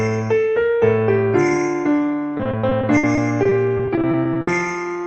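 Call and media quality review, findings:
Choppy, robotic sound from 2.37 s to 4.49 s. Repeated packet loss (robotic sound) in the jitter buffer and concealment stage. About 18 short holes, longest 60 ms, each patched by stretching the previous sound. Roughly a fifth of the stretch is concealed. Top end stops near 8 kHz, which fits a band-limited Opus call path.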